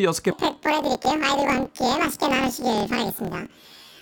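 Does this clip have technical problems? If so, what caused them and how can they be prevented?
Yes. From 0.31 s to the end, planar audio is read as interleaved. Each 26 ms block stores left then right samples but is read as alternating pairs. Every block plays twice at double speed, an octave high, buzzing at 38.3 Hz. Declaring the planar layout correctly prevents this.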